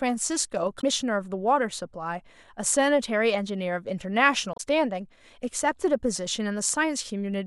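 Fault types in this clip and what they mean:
Damaged data in a compressed stream: a patch of the encoded file is corrupted, so the decoder misreads those frames and loses its place until it finds the next valid header. Here it's a short glitch, twice: 0.77 to 0.84 s and 4.53 to 4.60 s.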